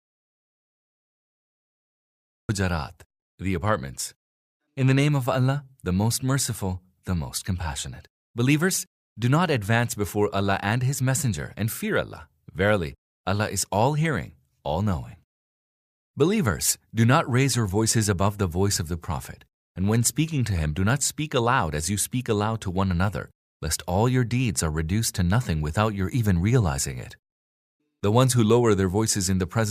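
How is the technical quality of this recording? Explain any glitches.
The recording has one glitch: an audio dropout to silence at the very start. From 0 to 2.49 s there is silence, with no room tone, before the speech begins mid-flow. This is likely from the input being disconnected or muted while zeros were still written.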